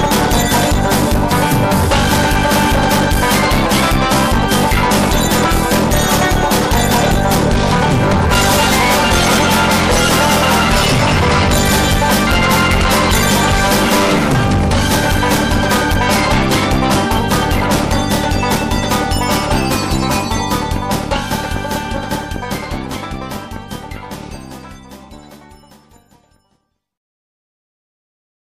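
Hard clipping runs through the whole recording. The signal was driven roughly 18 dB past what the converter or number format could pass, so its peaks are sliced flat and about a fifth of the samples sit against the ceiling. Every loud passage carries a harsh, buzzy fuzz rather than occasional crackle. That abrupt edge, with its harmonics reaching high into the treble, separates it from soft saturation, which rounds peaks off and sounds warmer.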